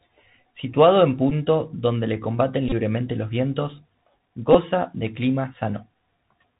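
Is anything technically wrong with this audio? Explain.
Yes. The whole clip carries Bluetooth CVSD headset codec damage, plainly audible. The one-bit delta coding, which fits a 64 kbps CVSD link, leaves nothing above 4 kHz, so a spectrogram shows a hard ceiling there, with granular hiss across the band and s sounds turning scratchy.

There are also three bursts of Bluetooth headset packet repeated: 1.30–1.32 s, just before "donde le combaten"; 2.69–2.72 s, between "donde le combaten" and "los vientos"; and 4.53–4.55 s, just before "de clima". Lost headset packets were replaced by re-decoding the previous packet's bits. That repetition every 3.75 ms produces a brief buzz near 267 Hz, lasting about 11 ms, 30 ms and 15 ms, with the longest unbroken run around 20 ms in the middle burst. On the waveform it appears as short stretches of identical repeating cycles, and on the spectrogram as a narrow harmonic comb on 267 Hz.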